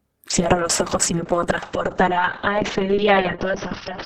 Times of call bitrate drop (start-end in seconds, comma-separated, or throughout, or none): 0.30-4.05